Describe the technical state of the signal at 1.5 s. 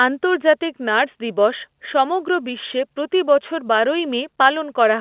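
At 1.5 s the speech is intact, carried through A-law G.711 telephone coding at 8,000 samples a second with its usual cut-off at 4 kHz, and no fault occurs at that moment.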